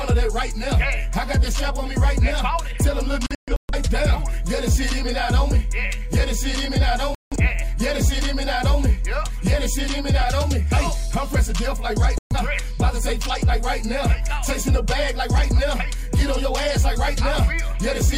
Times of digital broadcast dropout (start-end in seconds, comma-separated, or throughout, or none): 3.26-3.74, 7.15-7.36, 12.18-12.36